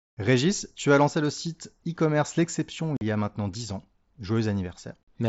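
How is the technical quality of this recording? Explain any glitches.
There is one clear glitch. At 2.97 to 3.01 s, unconcealed Bluetooth headset packet loss leaves a 45 ms hole. Nothing fills it, so the speech cuts out with abrupt edges.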